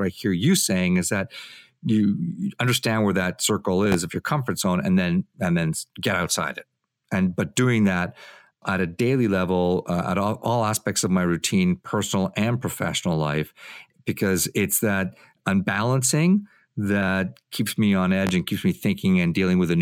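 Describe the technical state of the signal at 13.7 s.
At 13.7 s the signal is intact, with no audible fault at that moment.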